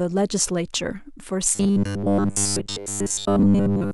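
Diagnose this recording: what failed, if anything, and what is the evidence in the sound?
Robotic sound from repeated short buffers, 1.55 s to end: rigid 100 Hz buzz, fitting 10 ms chunks, likely looped by starved buffer stage.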